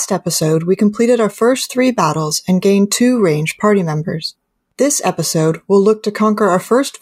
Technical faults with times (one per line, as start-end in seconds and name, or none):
none